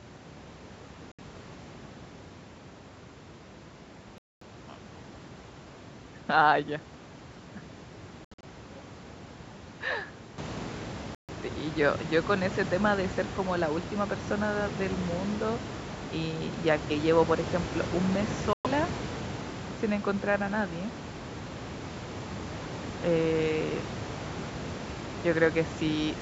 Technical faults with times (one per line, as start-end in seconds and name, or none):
1.12-1.19 Bluetooth dropout
4.18-4.43 Bluetooth dropout
8.24-8.45 Bluetooth dropout
11.15-11.30 Bluetooth dropout
18.53-18.67 Bluetooth dropout